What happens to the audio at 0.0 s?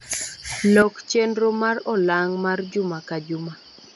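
From 0.0 s and through the whole clip, the speech sounds dull, with nothing above about 11.6 kHz and a rough, fluttering noise around tones. This is likely Dolby Digital compression at a low bitrate, consistent with about 64 kbps, where the band is narrowed and starved frequency lines are filled with noise.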